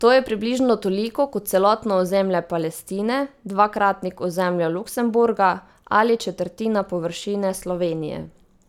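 At 2.59 s there is a bit error spike: a single sample jumps by a power of two and immediately returns, reaching about -28 dBFS. A flipped bit in memory or on a digital link causes this, heard as one sharp, broadband tick unrelated to the speech.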